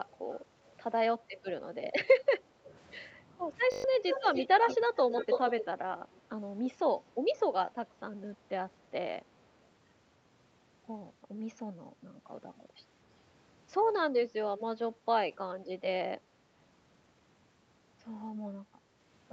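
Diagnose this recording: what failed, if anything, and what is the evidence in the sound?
Echo leak in call processing, likely an echo canceller at the loudspeaker end passing some pickup back: delayed copies appear at 0.3, 0.65, 2.65, 6.12 and 6.98 s, faint, and strongly from 4.09 to 5.65 s, trailing 195 then 278 ms.

Background gated by the echo canceller: the canceller clamped the microphone while the loudspeaker played, so the room sound dips by about 7 dB from 2.4 to 2.65 s.

System hang loop at the driver or buffer stage: the system stalled while the hardware kept cycling its ring buffer, repeating one 20 ms slice six times from 3.72 to 3.84 s as a brief 50 Hz buzz.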